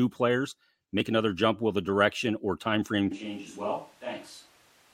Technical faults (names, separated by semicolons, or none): switch to a distant microphone